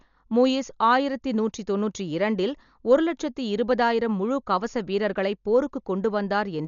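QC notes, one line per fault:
Throughout, Dolby Digital compression, likely: heavy damage, dull speech with nothing above 7 kHz, and rough, fluttering noise around voiced tones where starved frequency lines are refilled with dither. That noise fill sets it apart from a plain low-pass, and it fits a bitrate near 48 kbps.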